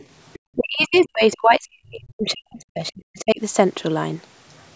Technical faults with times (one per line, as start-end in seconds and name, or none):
0.00-0.05 other side's voice leaking through
0.33-0.39 other side's voice leaking through
0.55-3.41 speech suppressed in double talk
0.81-1.09 other side's voice leaking through
2.87-2.91 other side's voice leaking through